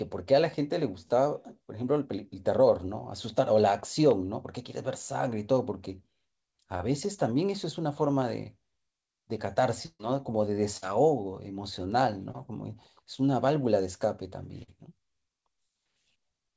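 Short concealed packet loss smears the speech at 3.80–3.84, 6.78–6.82, 12.31–12.35 and 14.63–14.70 s. About 20 ms, and 40 ms in the last, went missing and was bridged by continuing the preceding sound, giving a quick smear or wobble rather than an audible hole. At 9.86–10.01 s a burst of packet loss lasts far longer: about 140 ms is replaced by a held, fading continuation that ends in a brief silence before speech resumes further on. A second, shorter burst at 10.77–10.84 s drops about 40 ms in the same way. The call path's band limit, with nothing above 8 kHz, fits a wideband codec such as G.722 at 64 kbps.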